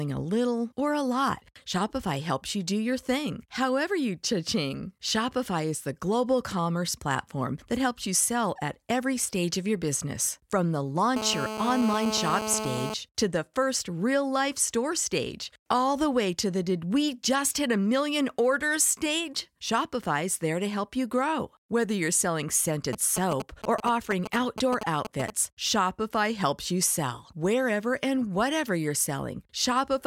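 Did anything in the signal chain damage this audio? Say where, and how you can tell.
Yes. From 11.16 to 12.94 s, ending just before "to the first real", a hard, raspy buzz sits under the speech at about 5 dB below it. It is pitched at 216.7 Hz, carries a dense stack of harmonics, and stays steady with no relation to the talking. This is GSM phone buzz from the analogue wiring stage. A 2G phone in a call pulses its transmitter 217 times a second, and some junction in the audio circuit rectifies those radio bursts into audible signal.

From 22.93 to 25.30 s, a different pattern appears: a galloping dit-dit-dit of brief buzzes, again at the 216.7 Hz burst rate and roughly as loud as the earlier buzz. These are GSM signalling bursts, also picked up in the analogue wiring. Here the nearby phone sends only short clusters of radio bursts, as it does during network signalling, so the rectified interference comes in grouped fragments instead of one continuous tone.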